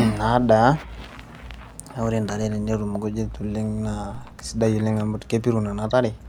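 DC steps at 0.37 s and 4.15 s in this speech: the waveform's zero line suddenly jumps, by about -34 dBFS and then about -31 dBFS, before bleeding away slowly as a 2 Hz high-pass pulls it back. Each jump lands as a brief low thump under unchanged speech.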